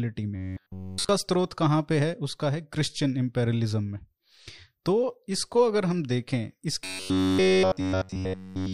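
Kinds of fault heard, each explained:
Robotic sound from repeated short buffers: from 0.36 to 1.09 s and again from 6.84 to 8.73 s, the speech becomes a stiff, metallic buzz locked near 94 Hz that only loosely follows the shape of the words. The likely cause is new audio arriving too seldom, so playback keeps looping a fragment of about 10.7 ms, which imposes that fixed pitch, while essentially all of the real audio in those spans is skipped.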